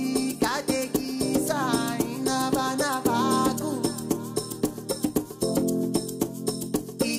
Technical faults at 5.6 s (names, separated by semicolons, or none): none